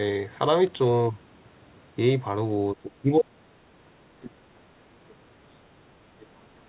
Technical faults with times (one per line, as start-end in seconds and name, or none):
2.74-4.73 speech suppressed in double talk
5.12-6.53 speech suppressed in double talk